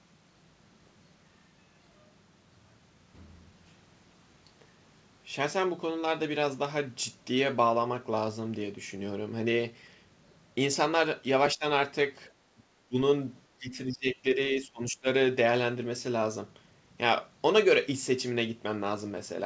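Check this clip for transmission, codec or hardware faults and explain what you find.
One fault: speech suppressed in double talk, heard at 11.55–11.64, 12.55–12.63, 12.88–12.96 and 13.58–15.07 s. The likely cause is an echo canceller that turned the talker down along with the far-end echo. The speech drops by roughly 15 to 25 dB, briefly and then for over a second. The band stopping near 8 kHz fits a G.722 call path.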